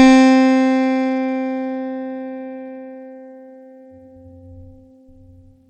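Throughout the music, treble flickers and vanishes above 14.8 kHz under a gritty haze, likely Bluetooth SBC compression starving the top sub-bands at around 96 kbps.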